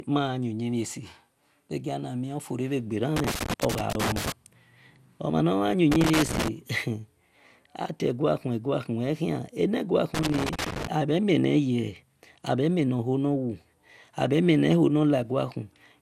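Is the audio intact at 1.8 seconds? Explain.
No, generation loss runs throughout, likely from about three MP2 passes near 96 kbit/s, giving swirly, hollow speech and a spectrogram ceiling at 16.4 kHz.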